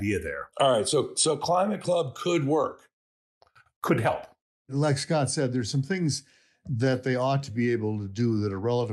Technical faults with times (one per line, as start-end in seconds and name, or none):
0.00-8.93 clock drift between sender and receiver
0.04-8.83 repeated timing corrections